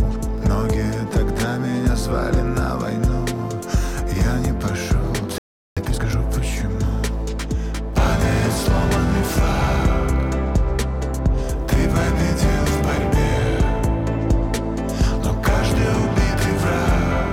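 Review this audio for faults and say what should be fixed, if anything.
At 5.38 s the audio cuts out in mid-flow and stays silent until 5.77 s, a gap of about 0.38 s. This is a playback stall: the output went quiet because the player had nothing ready to send, most likely because its buffer ran dry or its playback thread was held up. When sound returns it continues from the point where it stopped, not from a later point. To prevent it, keep a larger buffer and give the audio thread priority over other work.

From 5.77 s to 6.15 s, right after the gap, the audio runs at twice its normal speed while keeping its normal pitch. This is time-compressed catch-up: to recover the delay built up during the stall, the player removes short slices of audio and cross-fades the remaining pieces together, which is why the sound is hurried but not raised in pitch. Here it makes up the lost time in under 0.4 s. 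To prevent it, avoid the stall that triggers it, or spread the recovery over a longer stretch at a milder speed-up.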